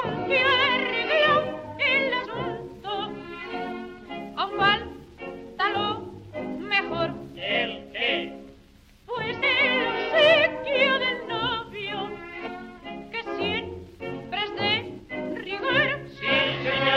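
At 2.24, 4.48, 9.42, 12.46 and 14.99 s, compressed frames are skipped, and the audio leaps ahead by roughly 150, 70, 200, 150 and 70 ms. There is no silent gap as in a dropout.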